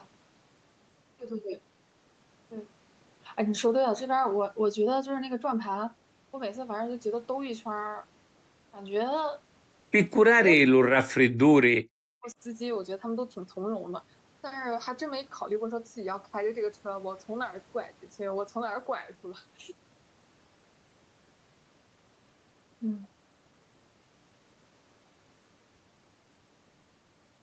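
It's a speech recording, and around the 10-second mark the talker gets chopped. There's a brief dropout from 10.33 to 10.40 s, then a longer patch from 10.56 to 12.38 s where the voice sinks very deep, on the order of 40 dB, and keeps breaking up for most of that stretch. That's likely speech suppressed in double talk: the canceller couldn't tell the near talker from loudspeaker echo while both sides spoke, so it ducked everything. The band stops around 8 kHz, as you'd expect from call microphone processing.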